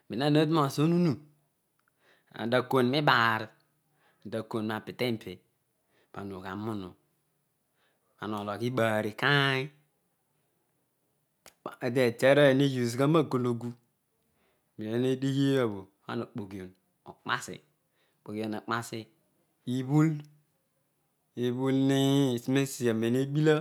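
No technical faults can be heard anywhere in the recorded speech, so there is nothing here to place in time or trace to a cause.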